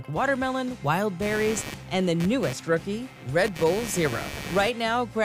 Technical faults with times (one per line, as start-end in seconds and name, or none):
1.22-4.69 computer activity noise